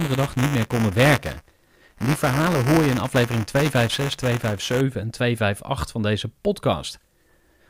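From 0.0 to 4.8 s, buffer tearing leaves a robotic 200 Hz buzz over the speech, fitting a 5 ms period, as a small slice of audio about 10 ms stale splices in. Waveforms show hard joins; spectrograms, vertical striations.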